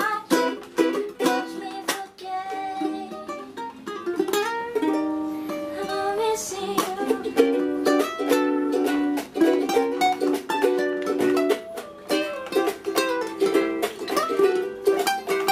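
No technical faults can be heard anywhere in the recording.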